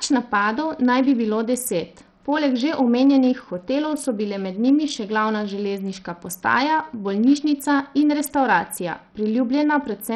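A starved Bluetooth SBC compression link, likely running at a low bitrate, coarsely quantises the speech from start to finish. The upper bands thin out and flicker, nothing survives above about 17.4 kHz, and a gritty, aliased roughness clings to every syllable.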